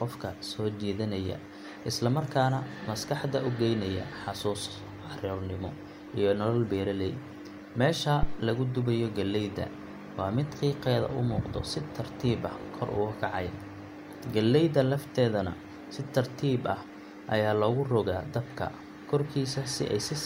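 At 8.23 s a phantom power thump interrupts the speech, lasting until about 8.43 s. A supply feeding the live input was switched, and that sudden voltage step passed through the coupling capacitors as a deep, low-frequency thump peaking near about -13 dBFS, dying away with a decay of about 44 ms. Unlike a plosive pop or a handling bump, it is a single electrical step with no breath noise or mechanical rumble around it.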